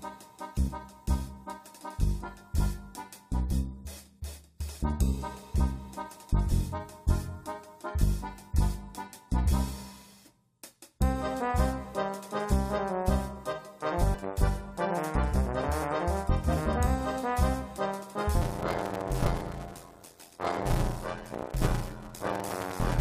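At 14.13 s there are compressed frames skipped: roughly 150 ms of audio, about seven frames, drops out, so the audio jumps ahead. From 18.41 s to the end, a block size mismatch (padded) zero-fills each block, which fits a 512-sample read, producing an 86.1 Hz buzz and slowing the audio to 0.625 times its speed at about normal pitch.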